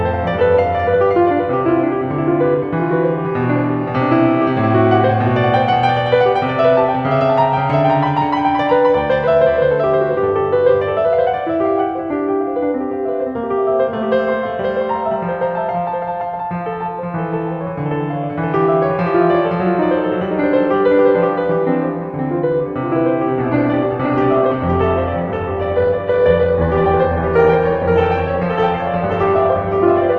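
From the start, the music carries a doubled audio track: a full-band copy about half a second late and about 5 dB quieter, likely an edit holding two copies out of step. Unlike an echo, it has no decay or room colour.

At 23.37 s, with no gap, the adaptive stream drops to a lower bitrate until 30.18 s: nothing above 8.1 kHz survives and codec artefacts thicken, unlike a filter's clean cut.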